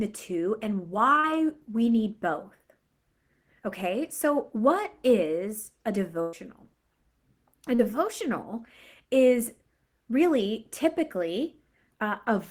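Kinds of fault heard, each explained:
Short concealed packet loss: Near 1.19 s and again near 7.75 s the speech gives a quick smear or wobble, then carries on. Each time about 40 ms of the call failed to reach the decoder in time. The receiver bridged the hole by extending the preceding sound, following its pitch if voiced or as shaped noise if not, then blended back into the real audio, so a short sound there can be lost.
Burst of packet loss: From 6.21 to 6.35 s the speech briefly hangs on a sustained, fading sound, then resumes further along. About 120 ms of consecutive audio was lost or arrived too late to play. The receiver kept repeating the last sound for about 114 ms, lowering it as the gap went on, with no silent stretch. When real audio returned, the speech in between was simply missing.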